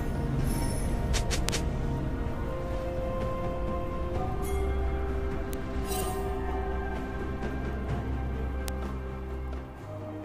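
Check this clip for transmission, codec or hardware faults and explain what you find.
Three bit error spikes: sharp isolated ticks at 1.49 s (peaking near -3 dBFS, likely spanning a few samples), 5.53 s and 8.68 s (each around -9 dBFS). Each is broadband and unrelated to the surrounding audio, a flipped bit briefly throwing one to three sample values by a power of two.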